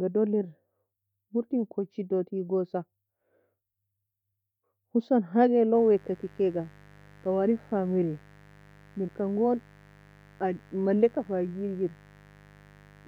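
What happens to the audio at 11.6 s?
At 11.6 s you're still inside the mains buzz that starts right after "husan hage" at 5.75 s: sharp 50 Hz switching spikes produce a steady, raspy buzz sitting well under the speech, running to the end.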